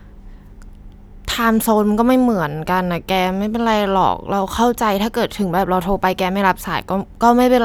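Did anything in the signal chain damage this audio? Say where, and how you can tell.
No, nothing in the chain seems to have damaged this speech recording, since there's nothing to hear that points to a problem at any stage along the way.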